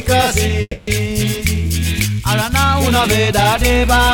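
Around 0.61 s the audio smears into a fading buzz for about 260 ms, drops to near silence briefly, then picks up again at 0.89 s with that stretch missing. That's likely a long network dropout, with the receiver padding over the gap.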